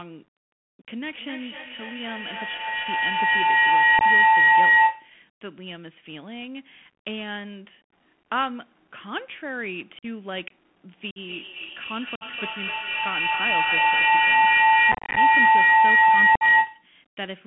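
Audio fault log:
Throughout: Bluetooth CVSD headset codec. The speech sits in a band of about 150 Hz to 3.4 kHz, which fits a 64 kbps CVSD link. Its one-bit adaptive step lags on loud, bright sounds, so sibilants turn scratchy over a grainy hiss. A spectrogram shows a hard ceiling near 3.4 kHz with speckled noise below it.
0.92–5.19 s and 10.92–16.92 s: feedback howl. A microphone-to-loudspeaker loop gains level on every pass, so it narrows to a tone around 2 kHz in the first run and around 1 kHz in the second. It rises to about 15 dB above the speech, and the loop repeats roughly every 0.3 s. A spectrogram shows a bright horizontal line that thickens over time, and the waveform shows a swelling envelope.
3.99–4.02 s (19 ms), 9.99–10.05 s (41 ms), 11.11–11.18 s (53 ms), 12.15–12.23 s (56 ms), 14.92–15.18 s (180 ms scattered over about 0.25 s, longest gap 34 ms), 16.35–16.43 s (56 ms): unconcealed Bluetooth headset packet loss. 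Lost voice packets leave abrupt holes, and the speech resumes briefly quieter. The cluster near 15 s sounds chopped. On a waveform these show as flat gaps, and on a spectrogram as vertical blank stripes.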